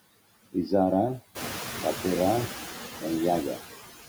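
Noise suppressor artifacts run through the whole speech clip, pushing steady background down by about 14 dB between words, unlike plain steady room hiss. From 1.35 s to 2.49 s, the noise suppressor is catching up: the room noise jumps about 12 dB around one and a half seconds, and the suppressor's estimate lags, cutting only about 6 dB at first and then sinking over 1.14 s. That gradual fade separates it from a sudden gate closing.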